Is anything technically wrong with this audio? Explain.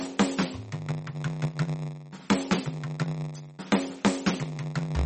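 Yes, two faults run through the whole music clip.

Block size mismatch (padded): each block is topped up with silence, producing a steady 93.8 Hz buzz, consistent with 512-sample reads, and a slowdown to 0.938 speed. Timbre stays normal, unlike a sample-rate error.

MP3 compression, likely at a low bitrate: nothing above 8.4 kHz, with watery, swirling artefacts and smeared attacks. The swirl sets it apart from a simple low-pass filter.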